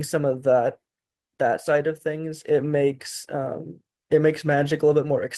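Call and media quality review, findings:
Lost packet rebuilt from error correction at 1.47 s: 20 ms rough, noisy speech slice, no gap. Opus in-band FEC low-bitrate copy. Spectrogram shows a smeared strip, waveform stays continuous.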